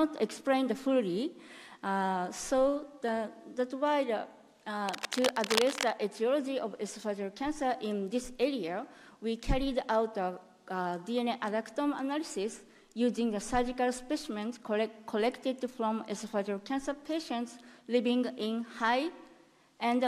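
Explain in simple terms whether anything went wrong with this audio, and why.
A worn cable or connector was likely moved, so its electrical contact kept breaking up. That cable scratch noise adds fairly loud scratchy rustling from 4.89 to 5.92 s.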